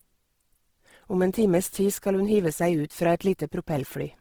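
Across the whole speech clip the sound is grainy, rough and plainly noisy, which points to Opus compression in its music-style CELT mode, likely at a very low rate around 16 kbps. Starved of bits, the encoder fills weak bands with folded or synthetic content rather than dropping them. That is why there is little of the swirling, watery texture of MP3 and instead a coarse grit over the voice. The bandwidth stays full, reaching about 20.4 kHz.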